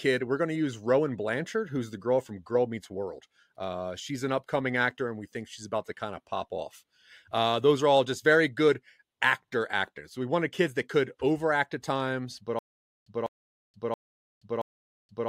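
From 12.59 s to the end, the speech breaks into a stutter with silent gaps: a burst of about 0.20 s plays, then dead digital silence for about 0.48 s, and the same burst returns four times at an even 0.68 s period. The playback or stream likely stalled, replaying its last buffered fragment at each retry before running dry, so the speech that belonged in those gaps never arrives.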